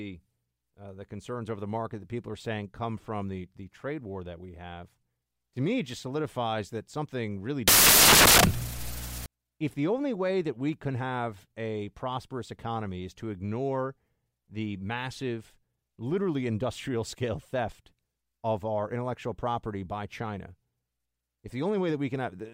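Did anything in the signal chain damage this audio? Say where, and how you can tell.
Yes. After "solidifies that something really", from 7.68 to 9.26 s, the speech turns into loud, harsh broadband noise until "if the only way". That's samples built from the wrong bytes, a sample-format conversion slip: misassembled bytes push the jittery low bits up into the loud part of each value.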